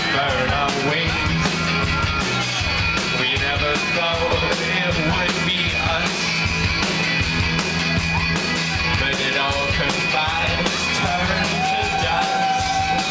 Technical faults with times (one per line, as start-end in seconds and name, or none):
none